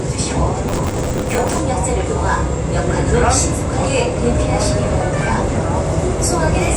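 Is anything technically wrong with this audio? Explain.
Yes. From 0.68 to 1.60 s there is processor overload crackle. The processor could not fill its short audio buffers in time, and missed deadlines piled up. Each miss replayed a scrap of old audio with hard edges. Together they form a gritty tearing over the sound.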